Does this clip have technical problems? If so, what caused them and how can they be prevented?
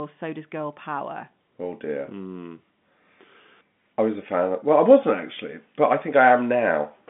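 No, there are no technical problems in this clip. The speech has the narrow sound of G.711 telephone coding, with the line band running from about 150 Hz to 3.5 kHz and nothing heard above 3.8 kHz.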